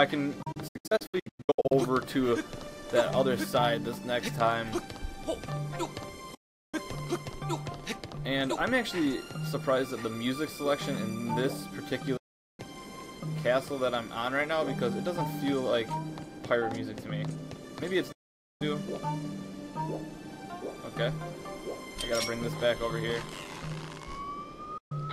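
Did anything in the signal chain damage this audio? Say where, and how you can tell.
Yes, digital broadcast dropout at the reception stage: the receiver muted at 0.42–1.72 s (scattered short holes), 6.34–6.74, 12.17–12.60, 18.12–18.62 and 24.78–24.92 s. Each gap opens with a quick 8 ms fade and appears as flat waveform and full-band blank spectrogram columns, with the sound lost, not delayed.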